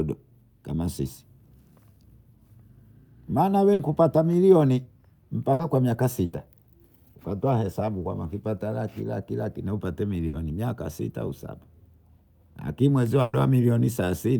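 Bursts of packet loss hit the speech at 3.73 s (before "kupata milioni"), 5.53 s, 6.25 s (after "kwa miaka"), 10.27 s and 13.21 s (after "lakini mwenzio"). Each time the last sound is stretched into a fading buzz or hiss for 60 ms, 120 ms at 13.21 s, before playback jumps ahead past the equally long stretch of lost speech.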